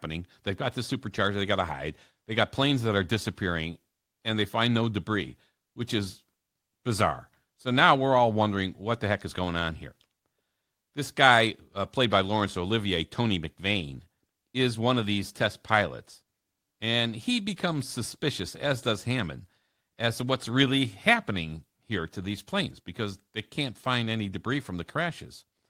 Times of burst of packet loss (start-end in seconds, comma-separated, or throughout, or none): none